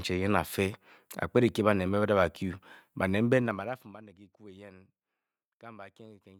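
From 3.31 s to 4.0 s, the speech carries zipper noise as its level drops by roughly 25 dB just before "kyiku eyen". The gain is lowered in discrete 2 dB steps at around twenty per second, with no interpolation between them. Each jump puts a small discontinuity in the waveform, heard as a rapid ticking that rides on the voice throughout the fade.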